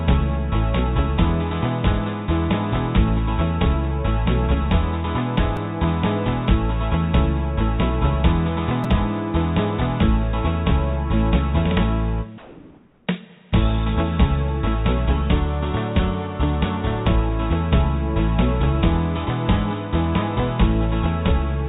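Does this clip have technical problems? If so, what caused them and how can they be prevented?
Yes. Two repeated buffers produce brief clicks or buzzes, at 5.57 s and 8.84 s. The first piece plays twice; the second plays three times. Each repeat lasts about 5 ms, which fits a 5 ms buffer starved of fresh audio. A larger playout buffer or a higher-priority audio thread would prevent this.

From 12.38 to 13.07 s, the real background gives way to a steady, featureless hiss about 2 dB quieter, sitting about 34 dB below the loudest parts. This is likely comfort noise in place of the background, generated while transmission paused. Disabling discontinuous transmission would prevent it.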